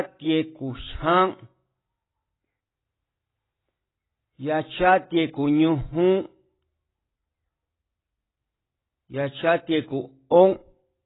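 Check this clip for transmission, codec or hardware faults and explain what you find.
One codec fault runs through the whole recording: heavy AAC compression. Nothing is present above 3.9 kHz, so the speech sounds dull and smeared, with a warbling, fizzy texture on sibilants and held vowels. The likely cause is AAC-LC encoding at a very low bitrate, around 16 kbps judging by the damage. With so few bits per frame, the encoder drops the upper band entirely and quantises the remaining spectral lines coarsely, smearing detail and leaving audible holes.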